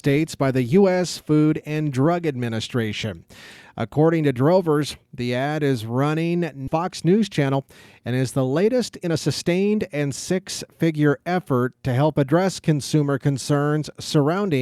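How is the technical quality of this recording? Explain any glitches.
The recording has two playback glitches.

At 6.67–6.69 s, just after "the ad is running", there is a skip ahead. About a second of audio was discarded while later audio already waited, so the speech jumps forward with no fill, and the two sides butt together abruptly.

From 7.39 to 11.07 s, ending just before "effort to help", a jitter buffer speed-up occurs. The buffer held excess audio, so the receiver trimmed short pitch-period pieces repeatedly, about a third of a second in total. Speech runs about 8% fast at unchanged pitch and sounds hurried.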